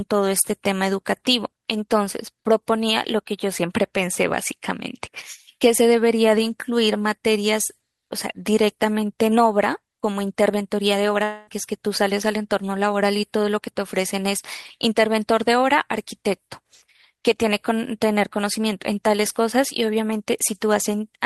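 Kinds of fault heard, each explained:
Long network dropout: Packets likely stopped arriving from 11.23 to 11.50 s, losing about 240 ms of speech. The receiver filled nearly all of that gap by extending the last sound into a fading buzz or hiss, with no silence, before speech resumed past the missing stretch.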